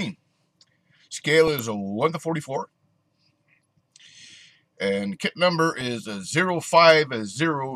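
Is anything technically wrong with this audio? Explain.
Yes. There is DAB burbling in three short bursts, at 1.47 to 1.59 s, 3.49 to 3.65 s and 5.74 to 5.81 s. Weak reception lets bit errors, roughly a tenth to a fifth of a percent, slip past error correction into the MP2 data, corrupting samples, which put short blips of noise in single sub-bands, and scale factors, which make sub-bands jump in level for up to a frame. Each burst adds burbling blips over the audio, spanning what points to several damaged frames.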